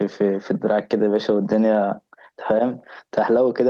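Gain pumping runs through the whole clip. The level keeps breathing. The swing is around 10 dB. Loud and soft syllables sit too close together, so the speech sounds squashed and flat. The likely cause is gain set far too high at the microphone, with a fast limiter pulling it down on each loud sound. The call codec's top end stops near 12 kHz.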